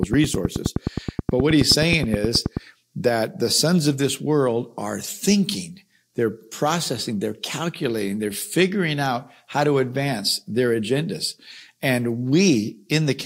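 From 0.03 s to 2.58 s, a train of clicks runs over the speech. The clicks arrive at a steady pace, about 9.5 per second, for around thirty pulses in all. Each one has much the same shape. They peak at about 15 dB above the speech, so they sound like sharp, even ticking that sits on top of everything and carries through the pauses. The likely cause is electrical interference or a faulty connection or power supply injecting repeated pulses.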